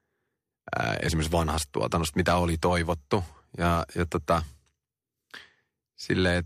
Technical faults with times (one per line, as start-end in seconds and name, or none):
none